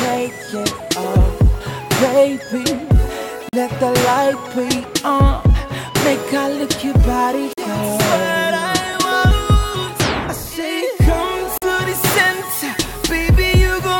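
Gap between chunks at 3.49, 7.53 and 11.58 s: the audio breaks into a 44 ms silence at each join between 4-second chunks. Nothing is lost; each gap pushes the sound back, leaving a regular hole.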